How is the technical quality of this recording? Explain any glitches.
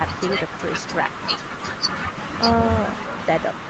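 The technical quality of this recording is good, with no glitches to explain.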